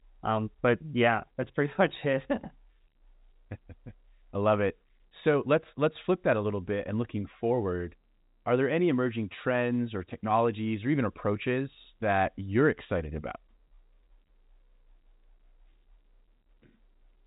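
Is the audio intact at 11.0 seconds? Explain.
Yes, the audio is intact at 11.0 seconds, with no fault there beyond the ordinary narrow telephone band of its G.711 coding, which carries nothing above about 3.8 kHz.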